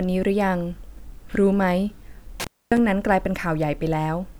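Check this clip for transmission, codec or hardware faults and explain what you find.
One hardware fault appears in the speech. At 2.40 to 2.78 s there is an intermittent contact. A loose cable or plug opens briefly, so the signal drops out for about 250 ms. Crackle marks both edges of the gap, and faint hiss remains while the line is open.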